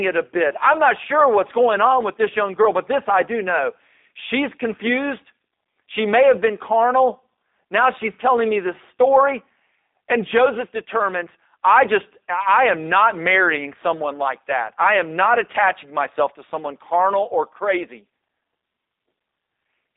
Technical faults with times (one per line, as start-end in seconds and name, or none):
0.00-19.97 G.729 codec